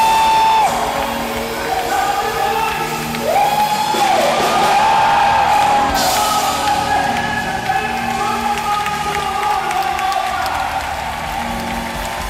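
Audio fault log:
No faults detected in this clip.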